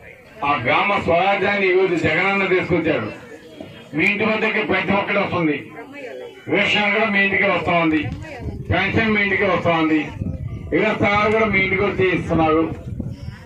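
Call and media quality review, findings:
No audible transport, device or processing defects detected anywhere in the audio; signal level and continuity consistent throughout.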